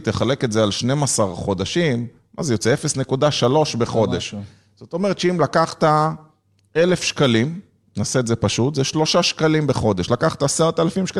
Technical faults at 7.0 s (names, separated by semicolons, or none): bit error spike